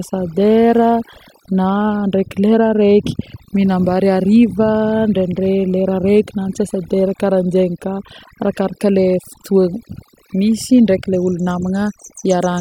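Throughout the speech, overdone noise removal suppresses bands near the noise estimate, taking quiet parts of the voice with them and leaving near-silent gaps with twinkling specks.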